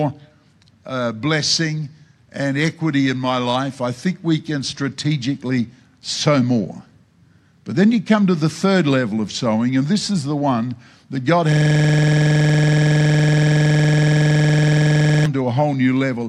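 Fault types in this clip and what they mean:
System hang loop: the playback system stalled while the hardware kept replaying one ring buffer, so from 11.52 to 15.26 s a 46 ms slice repeats about 80 times, a rapid 21.5 Hz stutter that fits a 2048-sample buffer.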